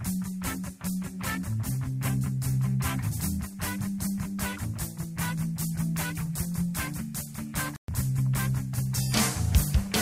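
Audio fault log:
7.76–7.88 s, playback stall: the sound just drops out for about 120 ms, a clean hole of silence in the middle of the flow, and then carries on. It's just nothing coming out and then the audio picking back up. That's most likely the player running dry, either its buffer emptying before new data arrived or its output thread getting blocked for a moment, so the device had nothing to play until it caught up.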